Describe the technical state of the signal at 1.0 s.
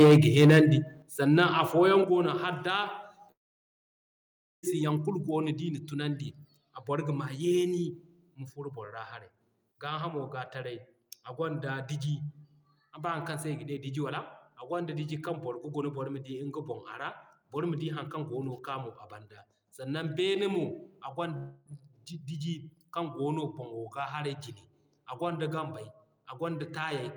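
At 1.02 s the speech and the background behind it drop together by about 8 dB in a single step, and the level stays lower afterwards. This is likely a microphone volume stepped down event, where the call software cut the device's input volume at once. Because the change is instant and then holds, it differs from automatic gain control, which rides the level gradually, and from a dropout, where the sound vanishes and returns.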